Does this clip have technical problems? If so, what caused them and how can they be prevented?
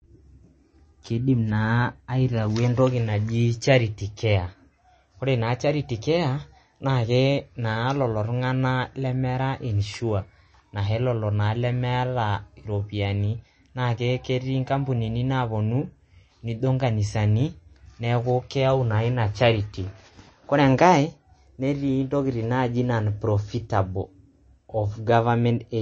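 Yes. Throughout the speech the sound is dull and watery, with nothing above 8.3 kHz, a swirling, warbling texture, and metallic chirps on s sounds. This is likely MP3 compression at a low bitrate, which fits around 32 kbps. Short of bits, the encoder cuts the treble at a fixed point and drops quieter frequency lines that flicker on and off between frames, producing the swirl and chirps. To prevent it, encode at a higher bitrate or keep a lossless copy.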